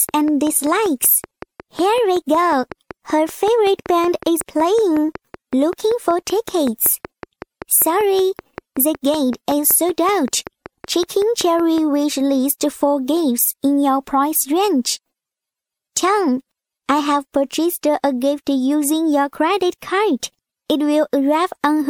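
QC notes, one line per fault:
0.09–11.79 s, train of clicks. A steady ticking repeats at 5.3 clicks per second, about seventy in all. Each click has much the same shape. Peaks stand roughly 10 dB above the sound. The likely cause is nearby interference or a faulty connection injecting pulses.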